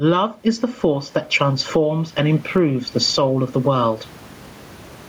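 Across the whole recording the speech sounds squashed, with the level swinging by around 15 dB. This is gain pumping, likely from the microphone gain being set far too high so that a fast limiter or compressor clamps down on each loud moment and releases in the gaps. The room noise sits about 39 dB below the speech.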